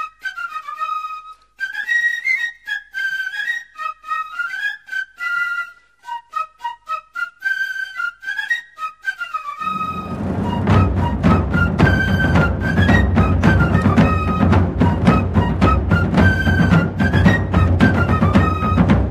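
At 1.35 s there is a block of digital silence: a run of samples lasting about 0.73 ms drops to zero, which fits a 32-sample block left unfilled, most likely because the output buffer was not written in time. The signal jumps to zero and back with no fade, so the two edges fall close enough together to merge into a single sharp tick rather than an audible gap.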